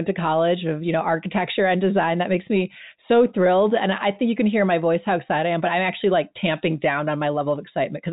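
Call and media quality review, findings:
No faults found: the speech carries the expected telephone band limit at 4 kHz with only faint, level-following quantisation noise, consistent with G.711 mu-law coding at 64 kbps working as designed.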